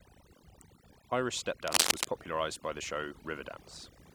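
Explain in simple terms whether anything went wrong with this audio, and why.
Yes, two things went wrong. The first is overdone noise removal across the whole recording. A noise reduction tool was set too strong, so it shut off narrow slices of sound whenever they looked like background hiss, taking the softer parts of the speech with them. The background drops and breaks up into twinkling specks.

The second is cable scratch noise, from about 1.67 to 2.05 seconds, just before "popularized by the show". The likely cause is a worn cable, plug or control being moved, so the electrical contact flickered rapidly. That flicker adds a burst of dense, uneven scratching or rustling over the speech for a moment, loud enough to sit clearly on top of the voice.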